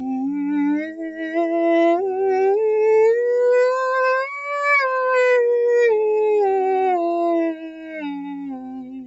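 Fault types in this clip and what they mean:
Channel delay (comb filtering), throughout: one channel arrives around 3 ms behind the other, and when the two are folded to mono, whatever they share cancels at evenly spaced frequencies. The first notch sits near 200 Hz, with more repeating up the spectrum, so this music sounds hollow and phasey, as if played through a tube. Because the delay never changes, the notches stay fixed rather than sweeping.
Noise suppressor applied to music or sounds, throughout: a suppressor built for speech stays active on this music and keeps mistaking sustained tones, ambience and reverb for background noise. It pulls level down and lets it back up in swings of around 5 dB, so the music pumps and flutters. Attacks get through mostly intact, while held parts and decays thin out and sink beneath them.
Sound cut by the noise suppressor, 0.86 to 1.35 s and 7.55 to 7.94 s: at these two points the suppressor judges the music itself to be noise and turns it down harder than elsewhere, by about 10 dB in the first stretch and about 8 dB in the second. 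Sustained and fading material drops away, and tails end early. The first dip lasts roughly half a second and the second about 0.4 s before the level recovers.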